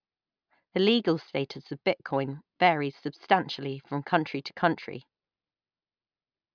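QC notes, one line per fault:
QC notes: no faults found in this speech clip.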